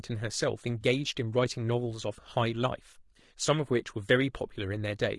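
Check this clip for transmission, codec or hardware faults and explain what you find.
Two faults are audible: codec damage throughout and one brief dropout.

Low-delay AAC compression runs the full length. The speech sounds rough and grainy, with noise between the harmonics and a lowered or synthetic top band. The likely cause is AAC-ELD's short frames resolving pitch poorly at a low rate, consistent with about 32 kbps.

AAC frame loss with concealment occurs at 0.81 to 0.84 s. About 20 ms of audio, pointing to a single lost frame, was rebuilt by the decoder from the last good spectrum, leaving a short smeared, noisy or phasey patch rather than a gap.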